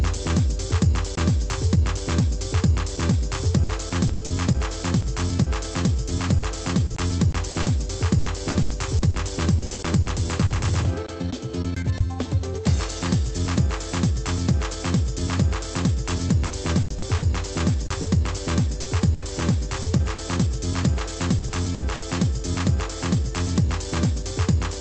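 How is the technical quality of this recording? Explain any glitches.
The recording has one clear glitch. It came through a call path whose band stops near 8 kHz, which fits Opus coding.

From 16.10 to 22.06 s there is repeated packet loss, heard as robotic sound. Packets kept going missing. Each hole, up to 80 ms, was filled by stretching the last sound. With twelve such gaps close together, the audio turns choppy, with small pieces missing.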